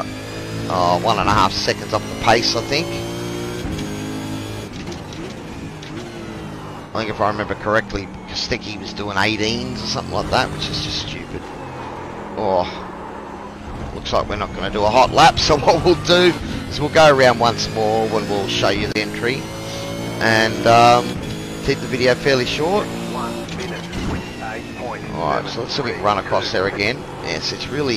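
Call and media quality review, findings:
AAC frame loss with concealment, 6.84–6.94 s: smeared, noisy patch of about 85 ms, which fits two lost AAC frames. The decoder replays the last good spectrum with altered phase and energy instead of dropping to silence.

CD skip, 18.92–18.95 s: brief mute of roughly 30 ms. Playback then resumes from a different point. A disturbance displaced the laser onto another track turn, so continuity breaks at that point.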